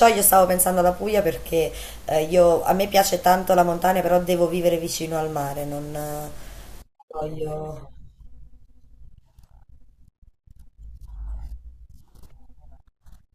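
From 5.15 to 7.36 s the speech picks up a gritty, inharmonic fizz that rides on the louder and brighter syllables, sitting roughly 25 dB below the speech itself. This is crude rate conversion: samples were simply dropped or repeated to change the rate, with no filtering, which fits a 48 kHz to 44.1 kHz conversion. The timing error recurs in a fixed pattern, producing shifted, inharmonic copies of the speech.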